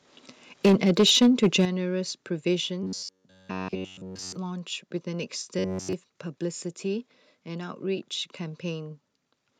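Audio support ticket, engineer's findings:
Microphone overload, 0.64 to 1.65 s: harsh crackle on the loudest peaks, which run about 7 dB past the converter's limit, with roughly 7% of samples flat-topped. Likely an input gain set too high at the mic or converter. The distortion follows the peaks, unlike codec smearing.

Microphone volume stepped down at 0.66 s (about -2 dB) and 1.65 s (about -8 dB): an abrupt drop in level, with the background falling along with the voice. This is likely automatic gain control reacting to the clipping. A noise gate would instead cut only the pauses, and a fade would be gradual, not a single step.

Robotic sound from repeated short buffers, 2.83 to 4.36 s and 5.59 to 5.93 s: a rigid metallic buzz at 93.8 Hz, with essentially all of the audio repeated. The likely cause is a starved playback or capture buffer looping its last block, which fits a block of about 10.7 ms. 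Unlike clipping, the buzz holds a fixed pitch independent of the signal's loudness.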